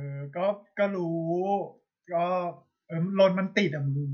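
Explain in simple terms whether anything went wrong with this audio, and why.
Nothing went wrong with this audio, because the speech in it has no fault that can be heard.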